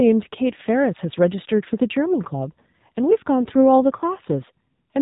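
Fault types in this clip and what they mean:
AMR narrowband mobile codec: the speech sounds boxy, buzzy and synthetic with nothing above 4 kHz, which fits AMR-NB at around 7.4 kbps modelling the voice coarsely.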